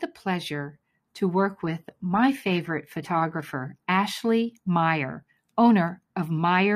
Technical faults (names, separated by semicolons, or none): adaptive stream at a lower bitrate